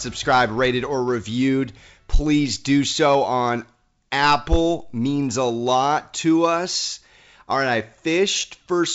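The speech comes through G.722 wideband telephone coding at 64 kbit/s, with any coding damage faint at most and nothing above about 7.7 kHz, and there are no faults to report.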